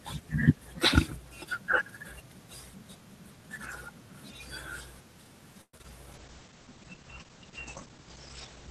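A speech recording with two call-transmission faults near its end. From 5.61 to 5.85 s there is repeated packet loss (robotic sound): four separate holes, the longest about 120 ms, follow one another in quick succession. Each is patched by stretching the preceding sound, so roughly two-thirds of that short span is concealment rather than real audio, and the result is choppy, with small pieces still dropping out where the patching runs short. From 6.12 s to the end, a call bitrate drop takes over. The encoder was handed a much smaller bit budget, consistent with a fall from around 32 to 12 kbps, and responds by coding more coarsely and narrowing the audio band. The top end collapses from about 20 kHz to 8 kHz, leaving the speech dull, watery and muffled for the remaining two and a half seconds without recovering.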